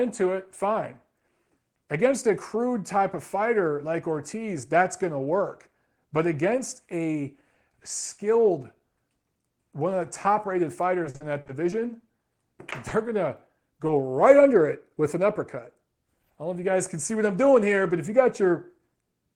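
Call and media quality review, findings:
Repeated packet loss (robotic sound), 11.03–12.26 s, right after "of the top rated": choppy stretch. Jitter buffer/PLC keeps re-extending around eight dropouts, longest 40 ms. Spectrogram shows smeared, repeated harmonic bands with thin breaks.

Short concealed packet loss at 12.89–12.93 s (before "going to") and 13.87–13.91 s (between "going to" and "right under it with"): brief 20 ms PLC smear or wobble, visible as a short repeated waveform patch.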